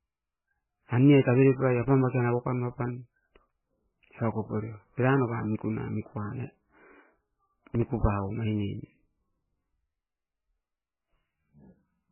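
Likely MP3 compression at a very low bitrate, around 9 kbps, runs throughout: nothing remains above 3 kHz, and heavy codec damage leaves the speech watery and swirly with smeared attacks.

From 7.75 to 7.88 s, processor overload crackle: repeated missed deadlines, around five, each leaving a tiny silent gap that points to buffers of roughly 1.5 ms, produce a gritty tearing burst.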